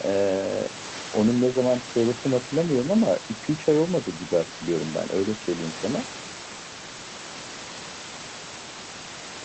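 Speech, with no technical faults to report.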